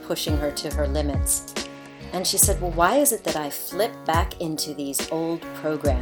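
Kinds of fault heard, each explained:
Bluetooth SBC bit pool drop: a congested link starves the encoder of bits, so the treble dulls and turns gritty from 0.57 to 3.28 s and from 5.59 s.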